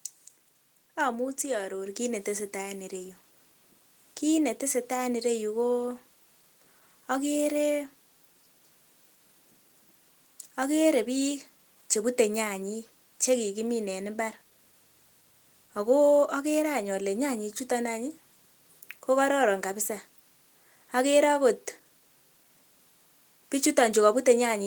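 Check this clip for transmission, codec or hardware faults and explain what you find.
One fault is present: a microphone volume stepped up at 1.86 s, just before "kiit neteseta en". The call software judged the input too quiet and raised the device's microphone gain in a single step of about 4 dB, so the speech and background noise jump louder together at that instant.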